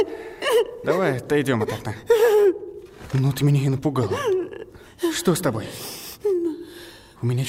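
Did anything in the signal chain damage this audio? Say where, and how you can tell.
No, nothing along the signal chain audibly damaged this audio; the signal stays continuous and intact throughout, with no stage leaving an audible mark on it.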